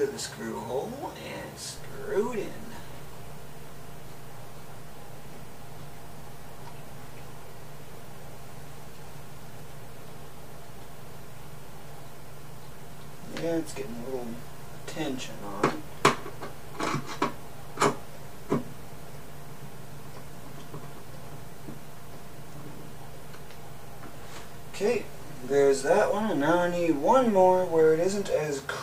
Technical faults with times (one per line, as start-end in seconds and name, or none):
1.78-28.32 DC step